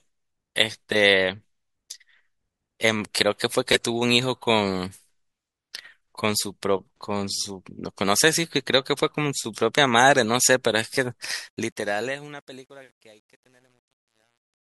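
A speech clip whose fade-out, starting around 11.3 s, shows truncation distortion on a fade from 11.31 s to the end at 14.65 s, worst from 12.06 s. The fade appears to be kept at about 10 bits without dither, so the quietest levels collapse into coarse steps. Unlike steady hiss or gate chatter, the grit worsens as the level falls.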